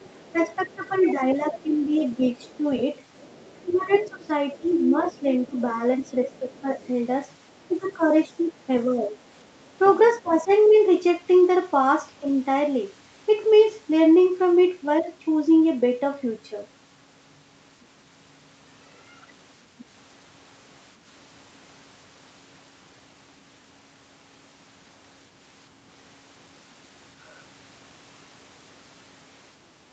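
Other side's voice leaking through, 0.04 to 6.87 s, then 7.88 to 8.06 s, 9.04 to 10.55 s and 19.78 to 19.85 s: a faint second voice sits roughly 20 to 30 dB under the speech, likely loudspeaker echo the canceller left behind. Speech suppressed in double talk, 0.33 to 2.64 s, 3.63 to 6.68 s, 7.68 to 9.16 s and 10.22 to 10.52 s: the speech dips by up to about 10 to 20 dB in patches, likely because the canceller turned everything down while both sides overlapped.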